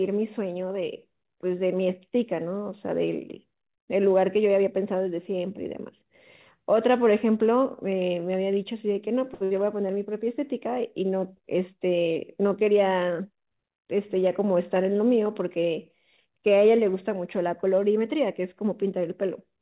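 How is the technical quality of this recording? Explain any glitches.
The recording has three glitches on a narrowband call path. Nothing sits above 4 kHz, which points to a G.711 mu-law codec. Two glitches come in quick succession near 9.4 s, and a third at about 13 s.

Short stall from a late packet, 9.34 to 9.43 s: a packet arrived late and the jitter buffer emptied, so the receiver held the last sound for 64 ms, then resumed with nothing lost. On a spectrogram the harmonics run flat and frozen, while the waveform repeats one cycle shape.

Burst of packet loss, 9.44 to 9.60 s: about 60 ms of audio never arrived in time. The receiver extended the previous sound for 58 ms with falling level. The waveform envelope tapers, then jumps ahead where later speech resumes, with that stretch missing.

Jitter buffer speed-up, 13.11 to 13.89 s: the buffer had built up extra delay, so the receiver trimmed pitch-period-sized pieces, around 70 ms in total. 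Speech plays at 110% speed with unchanged pitch and sounds rushed. The spectrogram shows syllables compressed in time, harmonic spacing unchanged.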